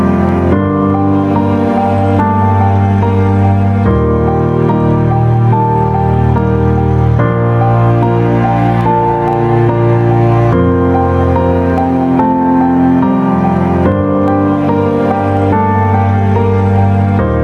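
All the way through the clip there's gain pumping, with the level swinging by around 10 dB. The likely cause is input gain set far too high for the microphone, with a fast limiter or compressor clamping down on every peak. It leaves loud and quiet moments sitting unnaturally close together, so the whole thing sounds squashed and breathing.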